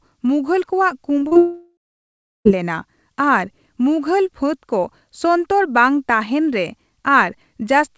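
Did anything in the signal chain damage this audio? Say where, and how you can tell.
Yes, the damage is in the network stage, ahead of the decoder. At 1.20 s there is a brief smear lasting about 30 ms, followed by a wobble from 1.27 to 1.33 s and another from 1.33 to 1.37 s. These are short concealed packet loss. Packets carrying roughly 20, 40 and 20 ms of audio arrived too late to play, so the receiver extrapolated from the preceding sound to bridge each gap and then blended back into the real audio. Through the G.722 call path, everything sits below 8 kHz.

Straight after those, from 1.37 to 2.47 s, the sound turns into a fading continuation of its last moment, then goes to silence for about 0.69 s. When the audio resumes at 2.47 s, it does not pick up where it stopped; the missing second is simply gone. This is a long network dropout, likely caused by the connection delivering nothing for over a second, so the concealment faded out and the lost stretch was never played.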